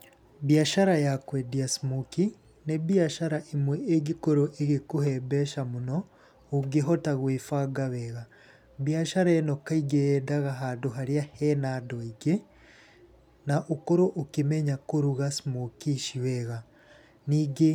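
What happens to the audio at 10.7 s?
Nothing goes wrong at 10.7 s; the speech plays through that moment intact, with no dropout, glitch or distortion.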